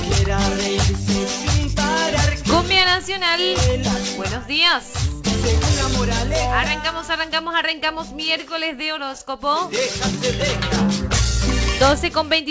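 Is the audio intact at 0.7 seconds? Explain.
Yes, the audio is intact at 0.7 seconds, with no dropout, click or other fault at that moment.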